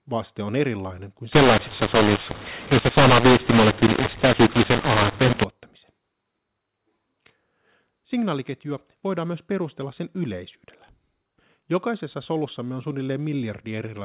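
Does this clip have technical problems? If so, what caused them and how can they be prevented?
Yes. Just after "vaste on erilainen kuin", from 1.32 to 5.44 s, the speech turns harsh and distorted. This is a mu-law and A-law mix-up. The telephone audio was coded with G.711 mu-law but decoded with the A-law table for that stretch. Sample levels get scrambled, some too loud and others too quiet. The quietest samples are lifted well above silence, so the gaps fill with noise. To prevent it, make sure the decoder's G.711 law always matches the encoder's, signalled per stream rather than assumed.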